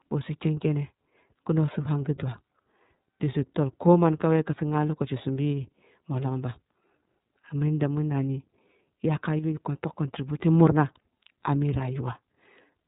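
Speech all the way through, and it's been squeezed through the iLBC codec: nothing above about 3.8 kHz survives, and the plainly audible rough, slightly synthetic edge fits 30 ms frames each coded independently, consistent with the 13.33 kbps mode.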